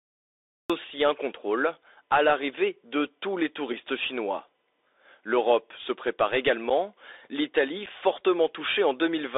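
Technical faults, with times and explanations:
Throughout: Bluetooth CVSD headset codec, plainly audible; band limited to roughly 300 Hz to 3.7 kHz, with scratchy sibilants and granular hiss from the one-bit 64 kHz delta modulation.
0 to 0.70 s: cut-off start, digital silence then the speech begins abruptly at "aussi un contrôle à" with no natural attack, as the stream began late.
6.70 s and 7.86 s: unconcealed Bluetooth headset packet loss, each a 7.5 ms hole with abrupt edges (the first just after "se prépare"), consistent with a single lost packet.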